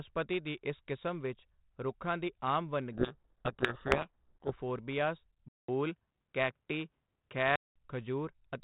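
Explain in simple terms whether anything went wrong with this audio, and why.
Two things go wrong in this speech. From 2.93 to 4.53 s, right after "ਵਿਚ ਰੁੱਖਾਂ ਦੀ ਆਮ", the speech is swamped by a harsh, grinding distortion that buries it. This is a codec payload misread. The phone-style G.726 codec carrying the audio packs each sample into a small group of bits. Here the receiving side read those bits in the wrong order, so every sample was rebuilt from scrambled values.

From 5.48 to 7.76 s the sound changes character. It opens with a brief gap of about 0.2 s. Then the speech turns duller and boxier, loses its crispest top end, and shifts slightly in loudness, with only a faint new background noise. This points to an input switched to a poorer device. The system likely changed mid-recording to a different microphone with a narrower range and its own tone, and the short silence marks the handover.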